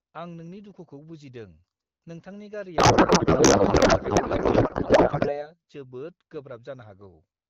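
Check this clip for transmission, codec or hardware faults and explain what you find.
There's a codec payload misread from 2.77 to 5.51 s. The two ends seem to disagree on AMR packing: octet-aligned frames being parsed as bandwidth-efficient, so every field lands a few bits off. The decoder still sees plausible frames and plays garbled noise and warble that barely tracks the speech. It clears at 5.51 s once framing agrees. Outside that stretch the AMR wideband (HD Voice) coding sounds clear, which fits a rate around 12.65 kbit/s.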